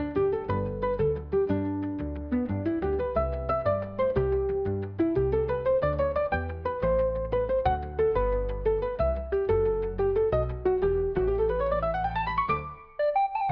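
No technical fault can be heard anywhere in this audio, which carries no dropout, distortion, glitch or other defect that a listener could point to.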